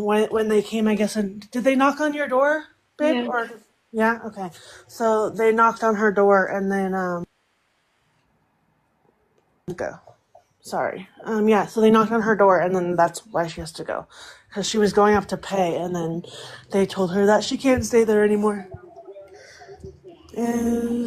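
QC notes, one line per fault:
No fault found.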